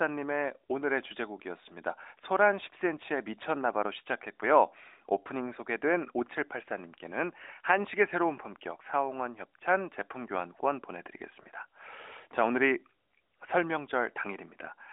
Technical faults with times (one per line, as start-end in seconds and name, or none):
none